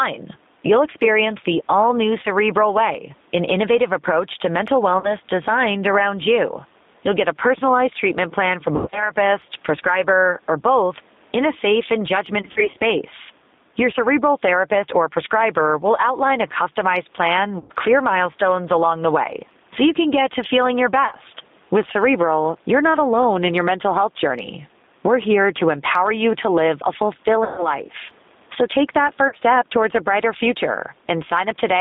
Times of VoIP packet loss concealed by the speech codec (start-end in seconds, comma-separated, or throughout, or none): 8.76-9.10, 12.42-12.77, 17.58-17.74, 27.44-27.69, 29.28-29.36